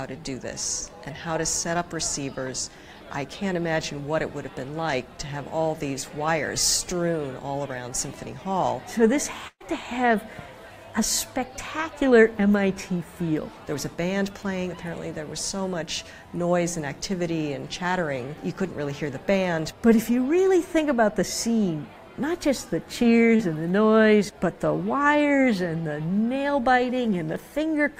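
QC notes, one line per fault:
9.47–9.74 s, burst of packet loss: The sound stalls into a drawn-out continuation of whatever came just before, fading over roughly 130 ms, then drops to about 50 ms of silence before picking up again further along. Around 120 ms of audio is gone. A run of packets arrived too late or not at all, so the receiver stretched the last sound and attenuated it, then skipped ahead once real data returned.
23.36–23.42 s, short concealed packet loss: A brief smear or wobble, about 37 ms long, covering a hole of roughly 40 ms. A small piece of the stream missed the decoder's deadline, so the receiver synthesised a continuation from the preceding sound and blended it back into the real signal, leaving a blur at the join.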